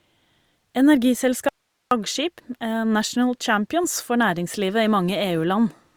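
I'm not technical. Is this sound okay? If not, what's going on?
No. From 1.49 to 1.91 s the speech cuts out abruptly for about 0.43 s, leaving only a faint hiss, then returns just as suddenly. This is an audio dropout to a faint residue. It isn't a natural pause or a fade. The signal was likely lost somewhere upstream, such as a loose connection or a brief interruption in the feed, while the recording chain after that point kept running and captured its own background noise.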